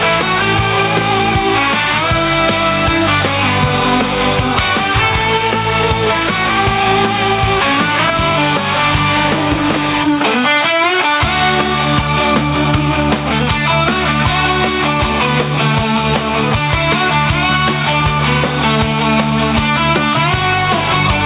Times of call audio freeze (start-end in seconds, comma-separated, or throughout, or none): none